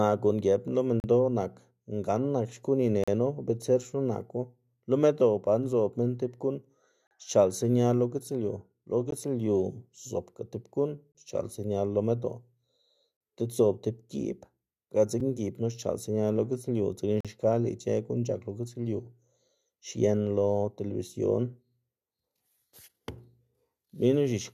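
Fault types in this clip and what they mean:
Gap between stream segments: the segment timestamps don't quite meet, so hard-edged silent holes of about 5 to 42 ms drop in roughly every 2 s.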